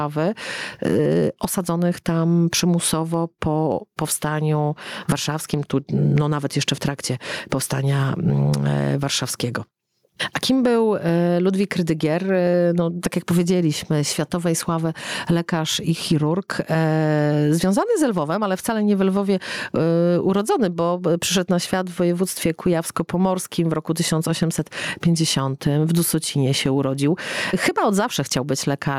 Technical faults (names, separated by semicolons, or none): gain pumping